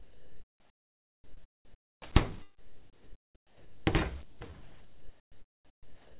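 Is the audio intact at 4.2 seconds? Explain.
No. The sender's voice detector likely mistook this stretch for background and stopped transmitting, so from 4.23 to 4.41 s the sound drops away. For those 180 ms the receiver fills the gap with steady comfort noise until transmission resumes.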